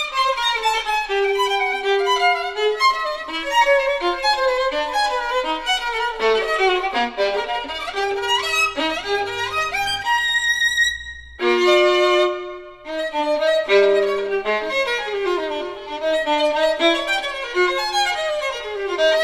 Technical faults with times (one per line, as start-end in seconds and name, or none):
none